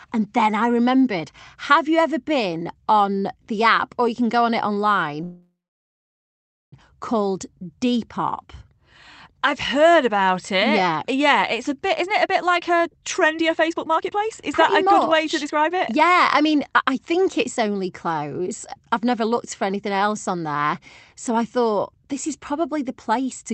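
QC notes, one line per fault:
5.23–6.74 s, call audio freeze: the sound stalls for about 1.5 s. A short fading buzz carries over the last sound, then it drops to silence for about 1.2 s. It picks up exactly where it stopped, so nothing's lost, just delayed. Likely packets held up in transit, draining the jitter buffer.
11.97–17.45 s, jitter buffer speed-up: the speech runs at about 127% speed with no pitch change, so it sounds rushed. The buffer had piled up surplus delay and trimmed it by cutting many tiny pitch-period slices, roughly a second and a half in total.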